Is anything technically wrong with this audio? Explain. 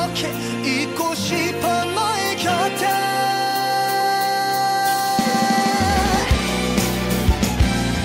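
No, nothing technically wrong stood out on listening to this audio.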